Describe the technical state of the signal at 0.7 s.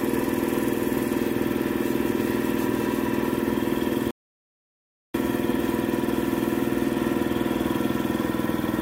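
At 0.7 s the signal is intact, with no audible fault at that point.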